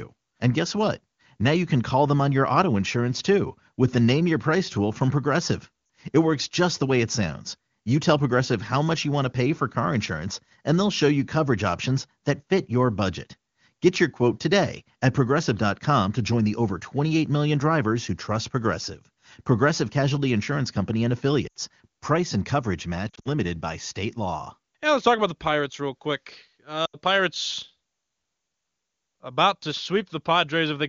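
Speech carried over the AMR wideband (HD Voice) codec. Lost AMR speech frames cause brief dropouts that fade toward near silence at 5.85–5.89, 21.48–21.54, 23.10–23.29 and 26.86–26.97 s. Each time, the decoder repeats its last good settings at falling gain.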